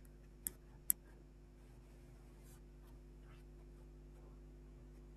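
Mains hum runs under the speech for the whole clip: a steady 50 Hz tone with some low harmonics, sitting only a few dB below the speech itself. The power line is leaking into the signal path through a ground loop or nearby transformer.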